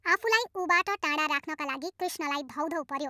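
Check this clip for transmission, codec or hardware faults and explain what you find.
There is one fault, and it runs through the whole recording.

Wrong sample rate, throughout: the samples are played back faster than they were captured, with no rate conversion. The speed-up is 1.45 times, which fits material recorded at 22 kHz and played at 32 kHz. Speech therefore sounds hurried and shifted up about 6.45 semitones, giving it a squeaky, chipmunk-like quality.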